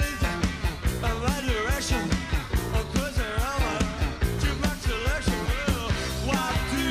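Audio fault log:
Nothing in this one catches the ear as a problem, so there's nothing to log here.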